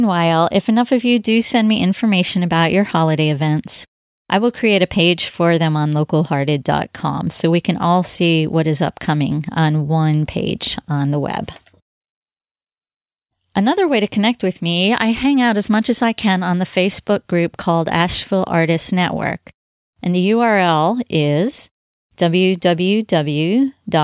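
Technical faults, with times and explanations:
No technical faults can be heard in this speech.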